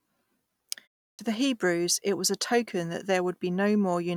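At 1.14 s, the speech resumes after a 0.35 s pause with a clipped start after a pause. The playback path dropped to an idle state during the silence. It then needed time to wake and lock again. About 49 ms of sound was swallowed, up to 1.19 s. The next word jumps straight out of silence. Its opening sound is missing. The onset has a hard, chopped edge instead of a natural rise.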